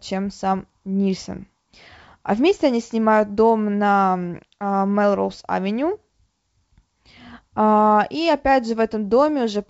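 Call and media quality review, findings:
No faults found; the speech is carried over G.722 wideband telephone coding at 64 kbit/s, and any coding damage from that path is faint at most.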